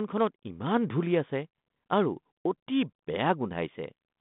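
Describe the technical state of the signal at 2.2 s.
At 2.2 s the speech is intact, with no fault at that moment, and the G.726 ADPCM telephone path at 32 kbit/s is passing it with its limited telephone band and only light coding texture.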